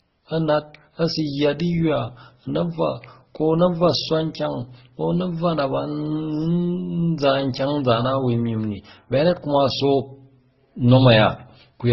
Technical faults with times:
0.00-11.92 transcoding between lossy codecs

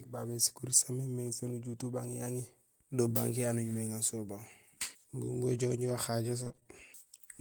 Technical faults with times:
6.43-6.67 repeated packet loss (robotic sound)

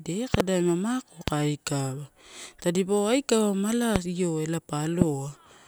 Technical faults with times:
0.34-0.42 loud pop
1.28-1.30 loud pop
3.96-3.98 loud pop
5.02-5.04 loud pop

